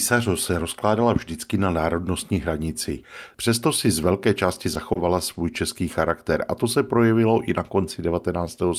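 At 4.93 to 4.97 s and again at 5.33 to 5.37 s, just before "český charakter a to", there's a short stall from a late packet. The buffer ran dry, the last sound was stretched about 20 ms, and playback resumed unchanged, so you hear a brief held smear with a slight buzz or dip.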